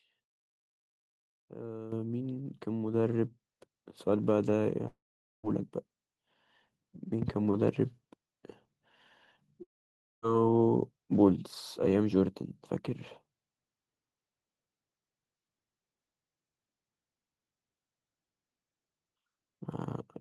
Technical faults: microphone volume stepped up; long network dropout; loud pop

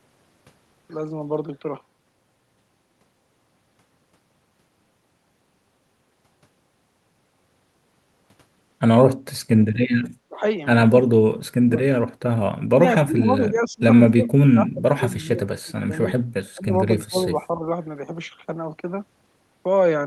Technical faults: speech suppressed in double talk

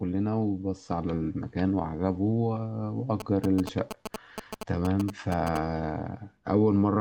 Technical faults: GSM signalling bursts

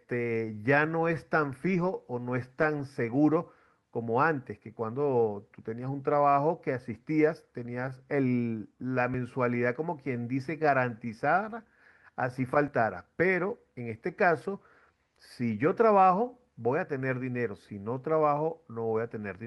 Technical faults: clock drift between sender and receiver; repeated timing corrections; dropped buffer (overrun)

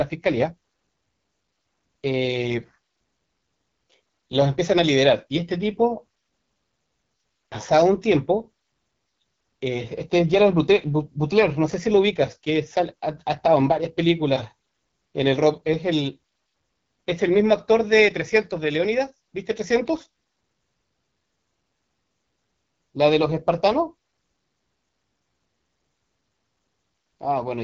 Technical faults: AMR wideband (HD Voice) codec

